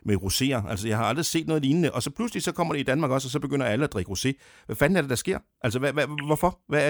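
No technical faults are audible.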